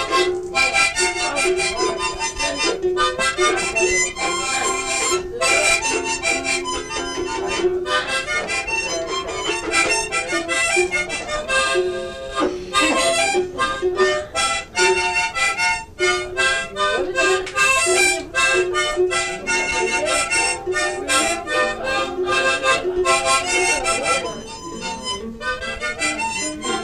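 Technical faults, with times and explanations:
24.32 s, DAB burbling: a few brief watery blips over the sound, where weak reception let bit errors, an error rate of a fraction of a percent, slip past error correction into the MP2 data. Corrupted samples put short blips of noise in single sub-bands across what sounds like several frames.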